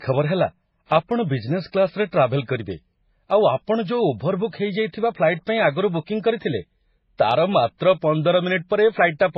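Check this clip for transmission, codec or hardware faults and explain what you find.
The speech carries a codec fault that runs the whole length of the clip: transcoding between lossy codecs. Nothing reaches above about 5.5 kHz, so the top of the sound is dull and sibilants are blunted. The cause is likely a low-rate MP3 pass, consistent with around 16 kbit/s, re-encoded as AAC-LC at around 32 kbit/s. The second encoder spends its bits reproducing the first one's artefacts, then adds its own. A single low-bitrate encode sounds different: it has one consistent artefact character, whereas here two textures overlap under the same narrow band limit.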